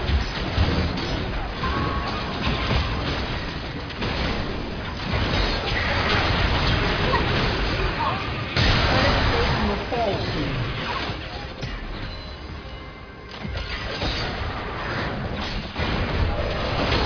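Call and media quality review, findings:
No audible faults found.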